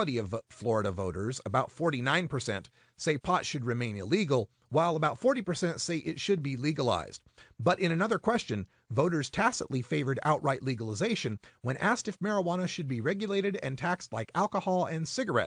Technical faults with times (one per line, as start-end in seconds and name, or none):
none